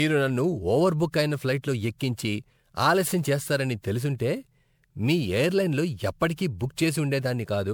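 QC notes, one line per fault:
throughout, generation loss: the speech sounds swirly, smeared and hollow beyond what one encode explains, with blurred attacks and nothing above 20.6 kHz. Likely repeated MP3 re-encoding, around seven passes at what fits 128 kbit/s, each adding fresh quantisation noise and spectral holes.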